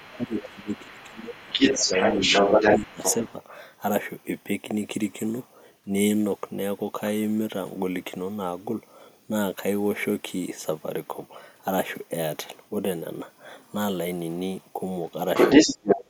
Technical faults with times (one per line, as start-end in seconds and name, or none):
0.00-3.33 other side's voice leaking through
0.17-2.20 speech suppressed in double talk
2.71-3.25 speech suppressed in double talk
15.36-16.01 other side's voice leaking through
15.64-16.10 speech suppressed in double talk